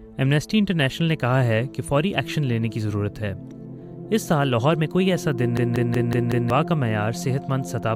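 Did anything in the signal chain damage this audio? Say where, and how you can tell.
Yes: a system hang loop at the driver or buffer stage, 5.57 to 6.50 s. One 186 ms chunk repeats five times at 5.38 Hz, a machine-gun stutter that fits a stalled 8192-sample ring buffer. On a spectrogram, identical blocks tile with vertical seams. About a second of audio is lost.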